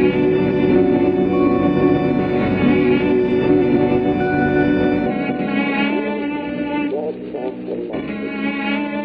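Frames out of order garble the music at 0.32–0.70, 1.66–1.96, 3.47–3.77 and 5.10–5.49 s. Neighbouring blocks of about 186 or 139 ms play swapped, giving a fluttering jumble. Unlike a dropout or repeat, nothing is lost or duplicated, and the timing stays intact.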